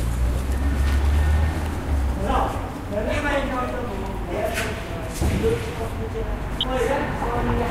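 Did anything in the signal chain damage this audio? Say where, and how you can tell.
Yes, DAB burbling at the codec stage, 6.51 to 6.65 s, a span that fits about six MP2 frames. Bit errors from weak reception slipped past error correction, corrupting sub-band samples or scale factors. On a spectrogram, isolated sub-band blips and level jumps appear.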